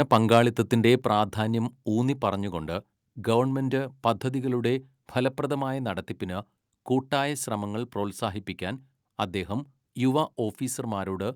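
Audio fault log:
1.02 s, microphone volume stepped down: the speech and the background behind it fall together by about 4 dB in a single abrupt step. Because everything picked up drops at once, the change sits ahead of any processing of the speech itself, at the input. The likely cause is call software cutting the microphone's input volume in one move after judging the signal too hot.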